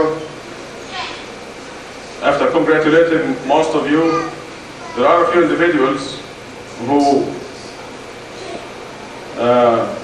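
Nothing in the audio stood out as a technical problem on listening.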